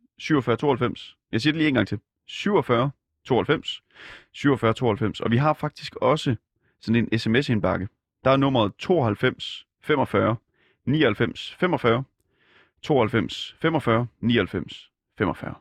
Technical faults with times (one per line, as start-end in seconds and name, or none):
none